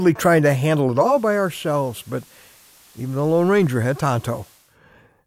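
Speech where, after "trying to handle", hiss rises about 30 dB below the voice and level drops about 4 dB from 0.89 to 4.79 s: digital radio blending to analogue FM over 315 ms fades.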